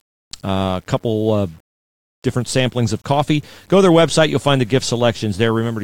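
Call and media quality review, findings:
Grainy distortion riding on the speech across the whole clip, most exposed in quiet passages and decays; quantization error around 40 dB below the signal. Likely low bit depth without dither: rounding that points to 8-bit resolution, error tracking the signal.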